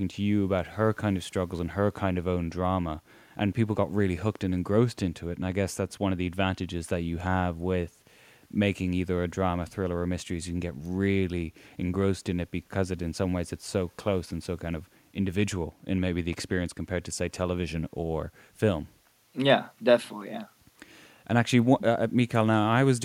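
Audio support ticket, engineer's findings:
No faults found on listening; speech audio, nothing to attribute to any component in the chain.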